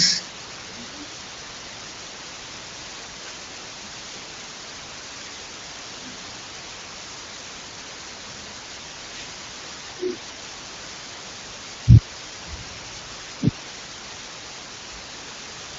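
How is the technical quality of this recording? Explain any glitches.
The recording is marred by heavy, constant hiss. Low bit depth with dither runs throughout the clip: the speech appears to be stored with only about 7 bits, and dither added before rounding turns the coarse quantisation error into steady white noise. The result is an even hiss at roughly the level of the speech itself, with no grainy distortion. The wideband phone-style band limit, with nothing above about 7.6 kHz, is audible alongside it.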